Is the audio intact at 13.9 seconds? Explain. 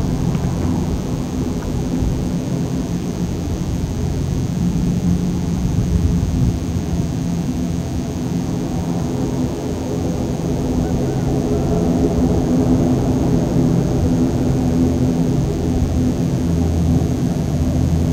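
No, not quite. At 13.9 s, as everywhere else, there's a DECT cordless phone buzz: a nearby handset or base pulses every 10 ms and the audio circuitry rectifies it, leaving a thin, steady 100 Hz buzz full of harmonics, about 25 dB under the sound.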